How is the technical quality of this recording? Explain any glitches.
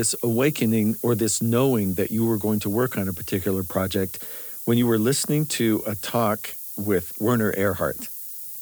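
Technical quality is poor, with one fault running through the whole clip. Low bit depth with noise shaping: the speech sounds reduced to about 6 bits, with the rounding error fed back and pushed upward in frequency. The result is a steady, thin hiss, strongest at the top of the band and only roughly 10 dB below the speech.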